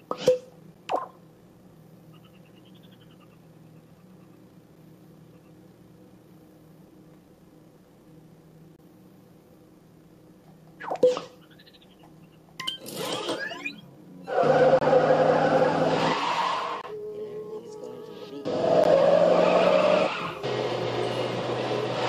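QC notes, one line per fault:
0.74 to 18.84 s, gap between stream segments: Six hard-edged silent holes, at 0.74, 4.76, 8.76, 14.79, 16.81 and 18.84 s. They last 12, 6, 26, 25, 25 and 14 ms. They fall on 2-second segment boundaries, where mismatched time stamps leave space the player fills with silence. No audio is lost.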